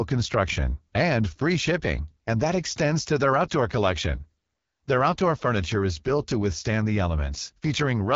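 The speech runs through the AMR wideband (HD Voice) codec for its whole length, at a rate that sounds like one of the codec's lowest settings, around 8.85 kbit/s. With so few bits, the pulse-driven model of the vocal tract describes each frame only coarsely, so the voice comes out plainly rough and raspy throughout. Nothing reaches above 7.4 kHz, and the top of the band is filled with shaped noise rather than real detail.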